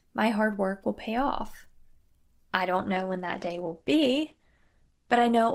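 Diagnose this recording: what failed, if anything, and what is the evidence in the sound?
The network stage failed, forcing an adaptive stream at a lower bitrate. At 2.77 s the speech abruptly turns dull, with nothing above 12 kHz, which fits Opus dropping from 64 to 12 kbit/s. A spectrogram shows a sudden hard ceiling; the waveform shows no gap.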